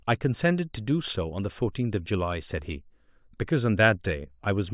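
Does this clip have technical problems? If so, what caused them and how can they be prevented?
No, there are no technical problems to report here.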